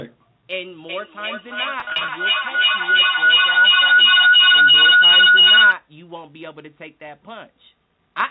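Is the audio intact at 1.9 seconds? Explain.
No. At 1.9 seconds a shrill tone near 3 kHz is present, its loop repeating roughly every third of a second, and at its loudest the howl peaks about 16 dB above the speech. This feedback howl runs from 0.89 to 5.81 s: a microphone-to-loudspeaker loop gained level on each pass until only its favoured frequency remained.

Inside that stretch, from 1.80 to 2.08 s, the speech turns held and buzzy in short bursts. This is packet loss with pitch repetition: about 150 ms went missing, scattered over 280 ms in runs of up to 40 ms, and the receiver bridged each gap by repeating the last pitch period.

A steady 345 Hz buzz that rises and falls with level is also present, as it is across the whole clip. It comes from a filter restarted on every block: each block begins from silence, producing a tick at the block rate, which fits a 128-sample buffer.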